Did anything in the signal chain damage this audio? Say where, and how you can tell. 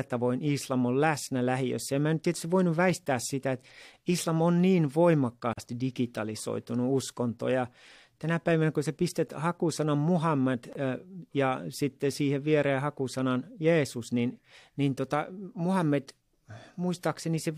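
Yes, at the codec stage: a gap at a join of encoded pieces. The speech stops for about 43 ms at 5.53 s and 25 ms at 10.73 s, edges smeared, then resumes where it stopped. Untrimmed encoder delay and padding remain; unlike packet loss, nothing is missing.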